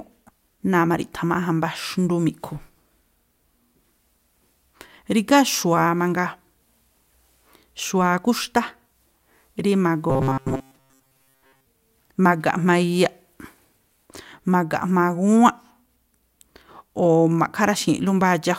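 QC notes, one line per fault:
10.10–11.67 s, robotic sound from repeated short buffers. Speech turns into a stiff metallic buzz at 133 Hz that loosely follows the words. The likely cause is a slice of about 7.5 ms replayed over most of the stretch while real audio is skipped.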